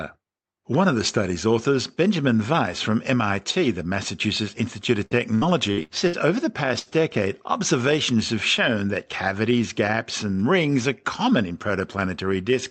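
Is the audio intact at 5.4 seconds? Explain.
No. Repeated packet loss spans 5.05–6.16 s. Five gaps of up to 65 ms are filled by extending earlier sound, giving choppy, robotic audio and smeared, repeated spectrogram patches.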